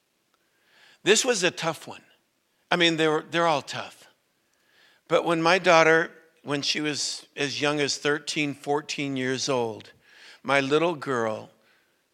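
From 2.43 s to 11.83 s the speech carries a regular click, about every 2.35 s, five or so in all. This fits clock drift buffer slips. Two clocks likely disagree by a few hundred ppm, so a short block of a few dozen samples is dropped or repeated.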